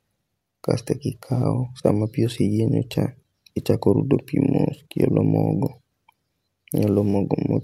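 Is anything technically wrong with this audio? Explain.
No, nothing technically wrong.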